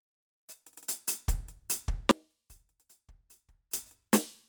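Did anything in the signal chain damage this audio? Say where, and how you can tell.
Yes. An audio dropout to a faint residue runs from 2.11 to 3.73 s. The music cuts abruptly to a faint leak about 25 dB down for roughly 1.6 s, then snaps back. The path stayed live, so the likely cause is an intermittent analogue connection.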